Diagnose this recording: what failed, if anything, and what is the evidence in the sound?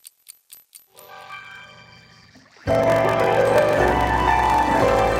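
Block size mismatch (padded) in the buffer stage: a 46.9 Hz buzz throughout, and playback slowed to 0.861 speed without the pitch drop a sample-rate mismatch would cause.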